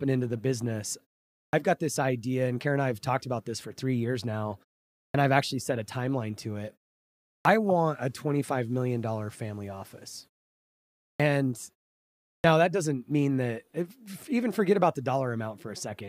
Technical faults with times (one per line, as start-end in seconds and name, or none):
1.47-1.53 clipped start after a pause
5.08-5.14 clipped start after a pause
7.39-7.45 clipped start after a pause
11.14-11.20 clipped start after a pause
12.38-12.44 clipped start after a pause